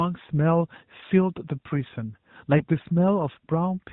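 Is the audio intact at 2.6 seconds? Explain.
No. Lost AMR speech frames cause a brief dip or warble from 2.58 to 2.65 s. A single 20 ms frame was lost, and it sounds like the decoder reusing the last good pitch and vocal tract settings at lowered gain.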